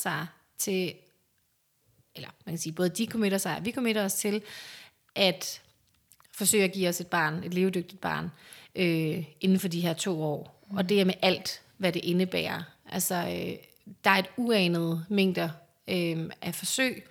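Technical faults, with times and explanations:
Nothing stood out on listening to this recording.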